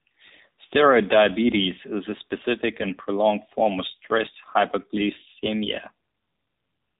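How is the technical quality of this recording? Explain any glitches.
The voice sounds narrow, boxy and telephone-like throughout, with a buzzy, somewhat synthetic edge on every syllable. That is AMR narrowband mobile codec damage, plainly audible for the whole clip. The audio has been squeezed through 8 kHz sampling, so nothing above 4 kHz survives, and the voice is rebuilt from a vocal-tract model excited by sparse pulses. The coarseness of that rebuilding fits a low 7.4 kbps mode, which explains the buzz.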